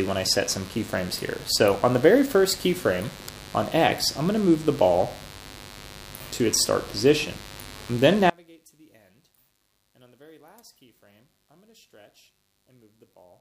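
A steady, raspy buzz runs under the audio from start to finish, sitting around 20 dB below the programme. This is mains buzz: sharp switching spikes from a dimmer, rectifier or poor shielding enter twice per 50 Hz cycle, spreading harmonics well into the kilohertz range. From 8.30 s to the end at 13.41 s the sound suddenly collapses by about 32 dB, leaving only a faint remnant. The likely cause is one channel inverted, so the shared content cancels when the two channels are summed to mono.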